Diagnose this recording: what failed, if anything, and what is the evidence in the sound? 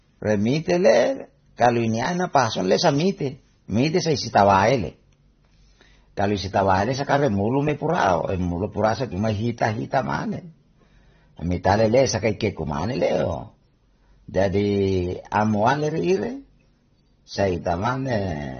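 The codec stage failed. Throughout the speech, nothing is heard above 6.3 kHz, so the sound is dull, and the damage is plainly audible. This is likely AAC compression at a low bitrate, fitting about 24 kbps. The encoder drops high bands and coarsely quantises the rest.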